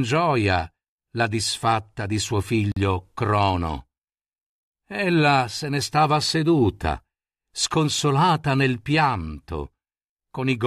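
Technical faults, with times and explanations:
2.72–2.77 s, gap at a join of encoded pieces: the speech just drops out for about 47 ms and then picks up right where it left off, with nothing lost. It's the seam between two separately encoded chunks that were butted together untrimmed, so the encoder's start-up delay and last-frame padding end up as dead air in the middle. The edges of the hole are smeared by the codec, so the truly silent part is shorter than that.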